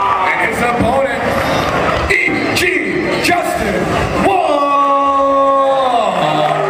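The audio has compressed frames skipped at 2.27–2.29 s, 4.75 s and 6.20–6.22 s, jumping ahead roughly a fifth, a third and a tenth of a second. Whole frames were dropped or rejected as damaged, so the audio jumps ahead by the length of the missing frames.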